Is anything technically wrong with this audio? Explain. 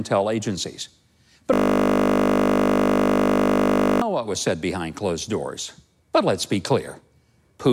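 Yes. A system hang loop runs from 1.54 s to 4.02 s, ending just before "what was said behind". The computer or audio driver stalled while the sound hardware kept replaying the same 20 ms slice of its ring buffer, over a hundred times in a row. Because the looped piece is so short, it repeats 50 times per second, so the speech is replaced by a steady, flat buzz at 50 Hz for about two and a half seconds.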